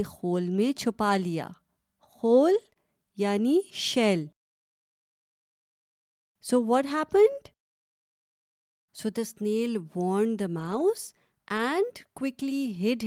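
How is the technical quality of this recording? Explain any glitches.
The recording has network packet-loss glitches in two forms, concentrated around 2.5 to 2.8 s and near the end.

Lost packets rebuilt from error correction, at 1.09–1.11 s, 2.53–2.67 s, 10.59–10.81 s and 11.57–11.59 s: packets went missing, and the decoder played low-bitrate backup copies carried in the following packets. There is no gap, but about 20 ms, 80 ms, 120 ms and 20 ms of speech respectively turn briefly rougher and noisier.

Short concealed packet loss, at 2.69–2.73 s and 2.73–2.77 s: two roughly 20 ms chunks arrived too late to use. The receiver extended the preceding sound to cover each hole, leaving a quick smear or wobble right after the rough patch.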